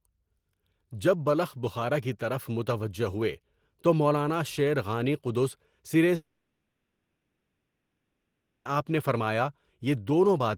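At 6.15 s, just after "غانی قدس", the speech breaks off. The last sound is stretched into a buzzing hiss that fades away. For about 2.5 s nothing new is heard, and near the end there is roughly 0.2 s of silence. Speech returns at 8.67 s, and the 2.5 s in between is simply gone. This is a long network dropout. Packets likely stopped arriving, and the receiver masked the gap before falling silent.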